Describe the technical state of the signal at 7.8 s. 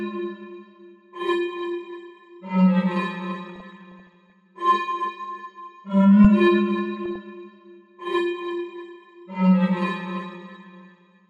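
At 7.8 s the sound is dull and muffled, with a gurgling, granular roughness, and upper frequencies flicker in and out. This runs through the whole clip rather than just this moment. The likely cause is MP2 compression: the encoder divides the spectrum into 32 sub-bands and shares out a limited bit budget, so the top bands are switched off intermittently and the remaining ones are coarsely quantised. The degree of damage fits a low bitrate of around 80 kbps.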